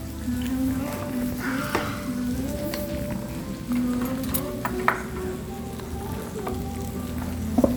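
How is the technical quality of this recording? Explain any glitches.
No glitches or transport faults are audible anywhere in this recording of sounds.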